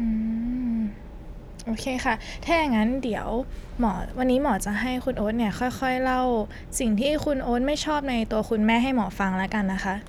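No technical faults are audible.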